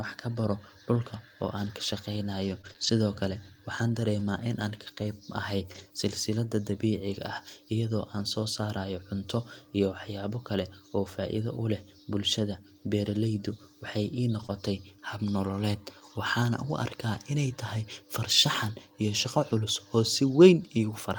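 Speech, with packet-loss damage in three forms. Scattered short gaps run from 0.95 to 5.80 s, starting after "ka baro". About four gaps occur across that stretch, roughly 60 ms missing in total, and none much longer than 20 ms. The receiver patches each hole by extending the sound just before it. So the speech stays clear, but small ticks and hiccups break through now and then. A lost packet rebuilt from error correction is heard at 14.42 to 14.44 s, at 17.14 to 17.16 s, and at 19.50 to 19.52 s, just after "farshaxan iyo shaqo". Each time a single 20 ms packet fails to arrive. The next packet carries a low-bitrate backup copy, and the decoder plays that instead. There is no gap. Those three 20 ms moments just sound briefly rougher and noisier than the speech around them. Short concealed packet loss follows at 14.46 to 14.50 s, right before "hab nololeed waxaana". Here about 20 ms is gone with no backup copy. 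The decoder invents a fill by carrying the last sound forward, then blends back into the real audio. The result is a smear or wobble. A brief consonant there may blur or drop out.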